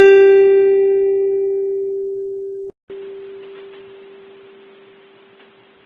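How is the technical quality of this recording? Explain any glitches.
The technical quality is poor. This music recording carries coding damage from start to finish, and partway through it drops to a much narrower, duller sound.

Transcoding between lossy codecs, throughout: the music likely passed through two low-rate lossy codecs in turn. The artefacts fit a roughly 19 kbit/s Vorbis pass followed by 16 kbit/s Opus. The second encoder wastes bits re-coding the first one's artefacts, so both sets of distortion are heard layered together.

Input switched to a poorer device, from 2.70 s to the end: a 200 ms silence marks the switch. After it nothing is heard above 4.1 kHz, so the music turns dull and boxy. A faint new background noise sits well below the music, and loudness stays about the same. This is likely a change to a narrower-band microphone or headset input.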